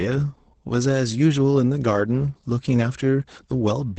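Opus voice compression runs through the whole speech clip. The codec's SILK linear-prediction mode is at work in wideband form. Nothing is heard above about 8.7 kHz, so the top of the voice is gone. The excitation is coded coarsely, which points to a low bitrate near 12 kbps. The damage is plainly audible. Speech sounds muffled and hoarse. A faint robotic edge rides on the voice throughout.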